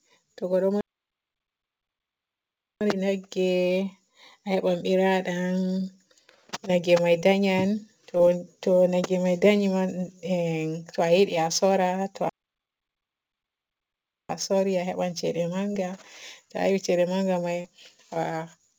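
Sample clock jitter runs through the whole recording. The converter's clock wanders by a few microseconds, so samples land slightly off time and steep parts of the waveform pick up error. That error sits roughly 35 dB below the speech, a faint hiss and roughness that grows on loud and bright sounds and disappears in pauses.

A playback stall cuts the speech off from 0.81 to 2.81 s, leaving 2 s of silence. The player most likely ran out of buffered data or had its thread blocked, and the speech then resumes after the gap. A second identical 2 s stall falls between 12.29 and 14.29 s.

Short concealed packet loss hits at 7.20, 8.17, 9.39 and 15.73 s. Each time, about 20 ms of audio failed to arrive in time on a call path that carries nothing above 8 kHz, consistent with G.722. The receiver extended the preceding sound to cover the gap, which leaves a brief smear or wobble. The last and largest gap, at 17.61 s, replaces about 40 ms between "ceede manga may" and "a to a yiɗi".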